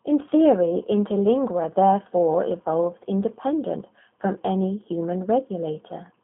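Speech runs through a G.729 codec for its whole length, sounding rough and synthetic, with a coarseness that fits an 8 kbit/s rate. On a spectrogram the energy sits between roughly 200 Hz and 3.4 kHz, with nothing above the cut-off and smeared, blocky harmonics inside the band.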